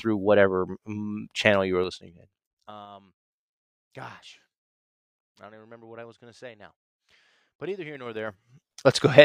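From 1.77 to 2.88 s the speech level drops by around 25 dB with zipper noise. The gain moves in unsmoothed 3 dB steps, about seven per second, and each jump puts a small click into the waveform, producing a ticking zip over the fade. From 7.90 to 8.73 s the level rises again by roughly 25 dB in the same 3 dB steps, now about ten per second, giving a faster, denser zipping.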